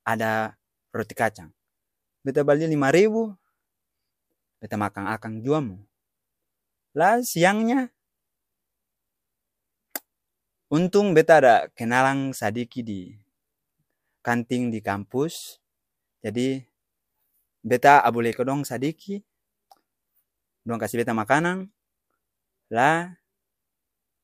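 No technical faults can be heard anywhere in the speech recording, and the signal stays steady and intact throughout.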